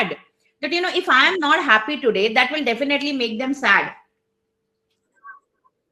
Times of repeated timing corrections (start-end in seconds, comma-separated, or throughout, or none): none